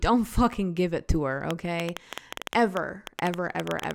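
Interference from nearby equipment or a faulty connection or power supply is the likely cause of the train of clicks in this speech recording, injecting pulses into the signal from 1.51 s to 3.92 s, just after "give it to her". Around twenty near-identical clicks arrive at an uneven pace averaging 8.7 per second. They peak roughly 15 dB above the speech, so they register as sharp ticking that cuts through the talking and the pauses alike.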